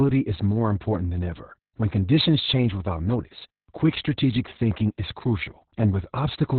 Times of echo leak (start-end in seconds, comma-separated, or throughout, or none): none